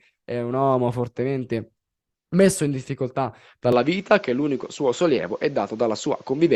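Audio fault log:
3.72–6.56 s, input switched to a poorer device: after "fortemente messo in difficoltà" the sound turns duller, with no gap or level jump in the waveform. The spectrogram shows nothing above 7.6 kHz and a new faint noise floor about 35 dB down, likely from a narrower-band microphone.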